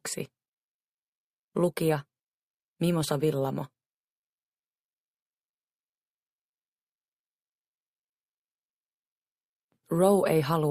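Nothing is technically wrong with this clip.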